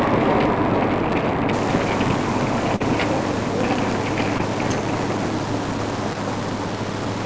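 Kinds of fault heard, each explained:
Filter restarted on every block: the filter resets each block, producing a buzz near 93.8 Hz that fits 512-sample blocks, seen as evenly spaced vertical ticks that track the level.
Low bit depth without dither: from 1.5 s the sound turns gritty, likely from rounding to 5 bits; the waveform shows stair steps, with level-tracking noise only about 15 dB down.
Short concealed packet loss: at 2.76, 4.38 and 6.13 s, gaps of 20 to 40 ms are filled by continued sound, heard as brief smears and seen as short blurred patches.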